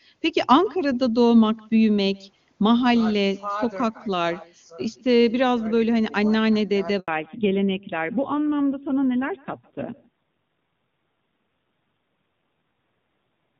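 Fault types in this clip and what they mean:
Echo with no canceller: the far end's loudspeaker feeds its microphone and nothing strips that out, so every phrase returns roughly 150 ms later at about 25 dB down, thinner. A spectrogram shows faint ghost copies trailing each syllable, offset slightly in time.
Handover gap: while the call switched networks no speech frames came through, leaving an 80 ms hole from 7.00 to 7.08 s. The sound drops out completely there; the waveform shows a short flat stretch and the spectrogram a clean vertical blank band.
Fallback to narrowband: from 7.08 s to the end the call leaves HD Voice for a narrowband codec, so nothing above 4 kHz survives and the sound turns duller and rougher. On a spectrogram the upper band, full before the gap, is abruptly empty afterwards.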